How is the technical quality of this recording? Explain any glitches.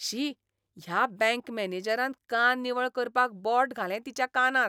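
No glitches or faults present.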